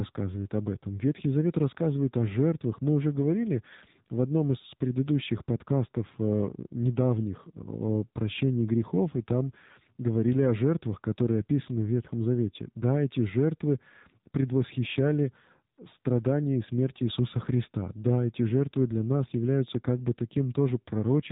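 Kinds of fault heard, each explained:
AMR narrowband mobile codec: the speech runs through AMR-NB at a rate fitting 7.4 kbps, so nothing above 4 kHz survives and voicing turns plainly buzzy and synthetic. A spectrogram shows a hard ceiling at 4 kHz with smeared, pulse-like harmonic structure below it.
AMR comfort noise: at 15.76 s and again from 16.00 to 16.04 s the sender judged the talker silent and stopped sending speech frames, and brief smooth synthetic noise fills in. The waveform shows short flat, even-textured patches where the speech envelope drops out.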